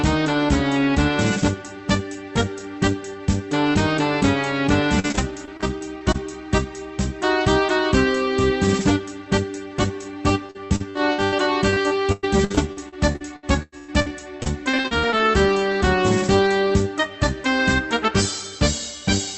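Repeated packet loss (robotic sound) hits three stretches: 4.99 to 6.16 s, 10.46 to 11.34 s, and 11.70 to 15.28 s. Packets went missing again and again, and each hole was patched by stretching the last sound forward, so the audio turns choppy with pieces missing. The second burst is the worst, with about 39% of it concealed and gaps up to 80 ms. The longest, 104 ms, falls in the third, all heard through Opus band-limited at 8 kHz.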